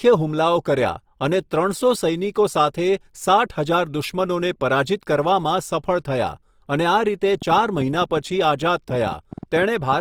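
Throughout the speech, Opus compression damage is plainly audible. Tones sound grainy and rough, likely from CELT-mode coding at a rate near 24 kbps. Bandwidth stays full to about 20 kHz.

From 7.42 to 9.94 s, a train of clicks appears. About fifteen clicks tick unevenly, about 6.4 per second, peaking a few dB above the speech. Interference is the likely cause.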